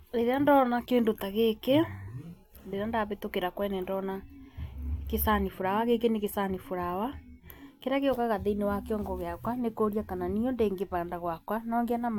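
No technical faults are audible anywhere in this recording.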